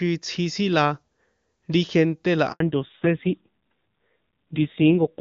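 A speech recording that breaks at about 2.52 s, right after "ri gente la": there's a handover gap where the voice cuts out within a few tens of milliseconds and stays silent for 80 ms, until about 2.60 s. That's the call being passed from one network to another with no speech frames getting through during the switch, so whatever was said in that slice is simply gone. The first half carries the clean, airy top end you'd expect from AMR wideband (HD Voice), consistent with its top rate of 23.85 kbit/s. From 2.60 s to the end there's a fallback to narrowband. Everything above 4 kHz disappears, and the voice turns dull and a bit gritty. That sound points to the link renegotiating down to the older AMR narrowband codec, likely at a low rate around 5.9 kbit/s, and the clip never recovers to wideband before it ends.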